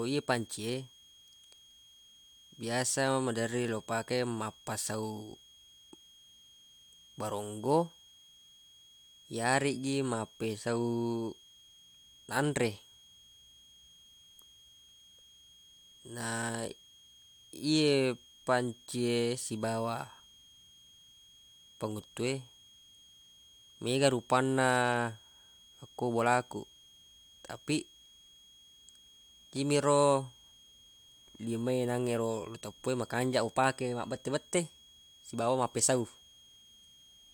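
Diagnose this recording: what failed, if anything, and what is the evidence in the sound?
A switching power supply feeding the analogue stage is running in an audible mode, so a switching supply whistle leaks into the speech for the whole recording: a faint high tone, roughly 30 dB below the signal, wandering between about 3.25 and 3.29 kHz as the supply's load shifts.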